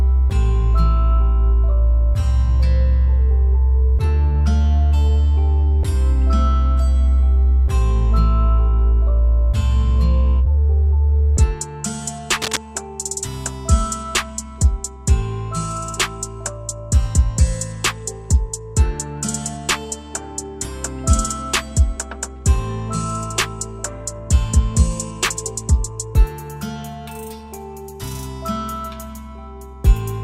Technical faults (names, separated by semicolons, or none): cable scratch noise